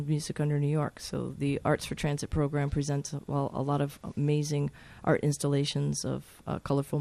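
The audio is dull and gurgling from start to finish. Upper frequencies drop in and out, and what remains sounds grainy and coarse. This points to MP2 compression, likely at a low rate of around 80 kbps. Too few bits leave high sub-bands switched off and the rest crudely quantised.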